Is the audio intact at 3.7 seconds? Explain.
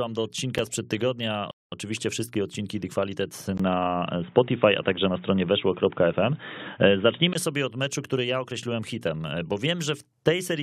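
No, at 3.7 seconds you're inside a stretch from about 3.58 to 7.35 seconds where the speech goes dull and boxy, with nothing above 3.8 kHz. That's most likely an input switched to a poorer device partway through, such as another mic or a headset's call profile. There's a brief 20 ms gap at the switch, the level shifts by a few dB, and a new, faint noise floor comes in underneath before the clearer sound returns.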